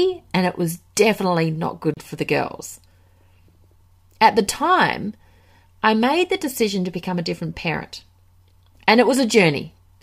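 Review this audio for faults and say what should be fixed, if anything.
At 1.94 to 1.97 s, between "it was definitely not" and "for the girls", the speech drops to about 31 ms of silence, a flat gap in the waveform and a blank vertical stripe on the spectrogram. This is likely a Bluetooth stall: radio interference delayed packets, so the headphones' buffer emptied before resent data arrived. Keeping the phone close to the headphones and away from crowded 2.4 GHz sources prevents these dropouts.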